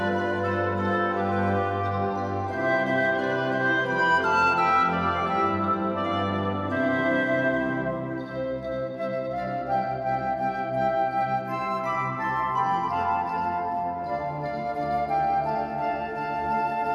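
No technical faults can be heard anywhere in the recording; the signal stays steady and intact throughout.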